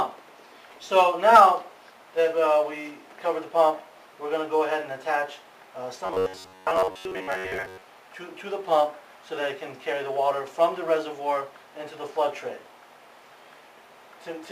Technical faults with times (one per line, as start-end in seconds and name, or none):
6.06-7.83 robotic sound from repeated short buffers